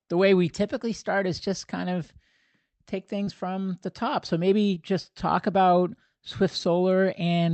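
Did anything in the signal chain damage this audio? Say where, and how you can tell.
Yes, at the network stage: short concealed packet loss. The sound briefly smears at 3.23 to 3.29 s, before "from the top", and again at 4.75 to 4.78 s, before "just talk about". Late packets left gaps. The decoder extended the preceding sound, then blended back.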